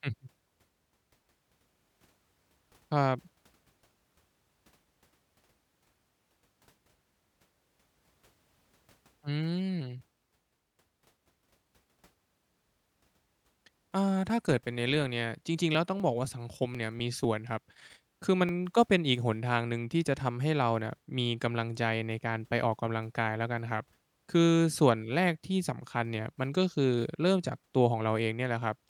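From 15.75 to 18.49 s the speech carries periodic USB or driver dropouts. Every 0.249 s, about a millisecond of audio is skipped, leaving regular ticks. A spectrogram shows evenly spaced thin vertical broadband lines, and the waveform shows small discontinuities at each splice.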